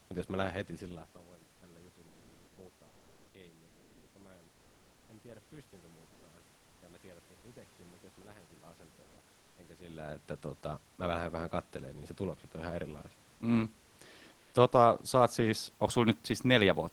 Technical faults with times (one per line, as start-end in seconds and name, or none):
2.07-2.57 comfort noise in place of the background
2.87-3.33 comfort noise in place of the background
3.67-4.15 comfort noise in place of the background
4.53-5.09 comfort noise in place of the background
6.07-6.23 comfort noise in place of the background
9.03-9.17 comfort noise in place of the background
14.33-14.53 comfort noise in place of the background